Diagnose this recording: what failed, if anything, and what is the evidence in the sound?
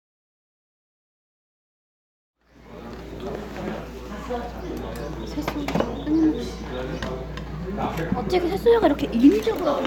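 Nothing failed at any stage: the level rises in a smooth fade-in from roughly two and a half seconds to 3.2 s with no hard edge at its start, and the sound shows no evidence of trouble in the wiring, conversion, processing, transmission or storage chain.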